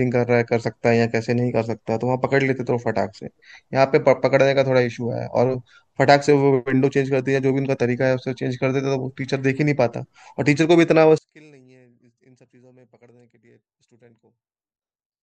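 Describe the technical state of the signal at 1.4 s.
At 1.4 s the speech signal is intact, with no audible fault at that moment.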